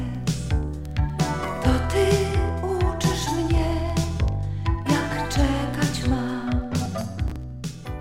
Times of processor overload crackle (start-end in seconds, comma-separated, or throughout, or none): 6.86-7.36